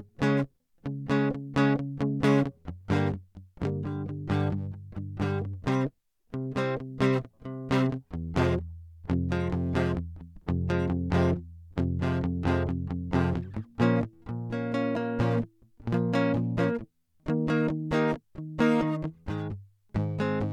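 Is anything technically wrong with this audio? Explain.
No, nothing technically wrong turns up anywhere in this music, so there's nothing here that needs fixing.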